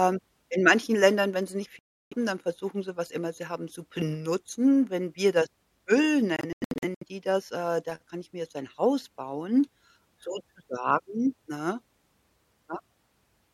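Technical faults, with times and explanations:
1.79–2.14 s, Bluetooth dropout: after "wenn sie nicht" the speech cuts to silence for about 0.33 s, then resumes at "dann versuchen sie was". The spectrogram shows a blank vertical band, likely from wireless packets missing their deadline.
6.36–7.04 s, Bluetooth dropout: several short silent holes, the longest about 93 ms and about 0.35 s in total, break up the speech before "die das äh da". On the waveform they appear as flat gaps, likely from packets lost in a burst.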